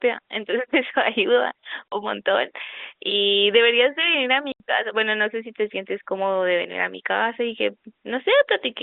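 At 1.89 to 1.92 s the speech drops out. About 40 ms of signal is gone. At 4.52 to 4.60 s a longer gap follows, about 80 ms. Both are packet loss filled with silence. Packets failed to arrive, and the receiver played nothing in their place. The gap lengths fit two and then four lost 20 ms packets. Each hole has hard edges. The G.711 telephone band, about 200 Hz to 3.6 kHz, carries on around them.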